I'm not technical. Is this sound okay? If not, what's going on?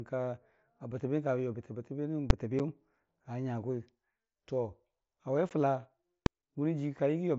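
No. At 2.30 and 6.26 s there are invalid numbers at full scale: a calculation broke and briefly forced the speech to maximum loudness, giving a single sharp bang rather than a gap. At 2.59 and 5.49 s, unconcealed Bluetooth headset packet loss cuts tiny silent holes of about 7.5 and 15 ms into the speech, heard as quick clicks or dropouts, not loud bangs.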